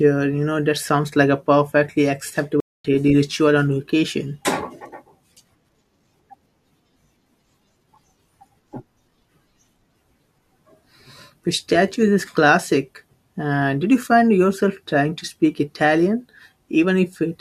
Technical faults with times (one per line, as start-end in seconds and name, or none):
2.60-2.85 stream reconnect